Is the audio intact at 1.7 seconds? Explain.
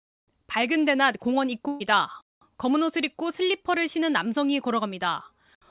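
No. A burst of packet loss runs from 1.68 to 1.82 s. The receiver covered the 120 ms gap by carrying the last sound forward while fading it, and then playback picks up 120 ms later, so that stretch of speech is missing.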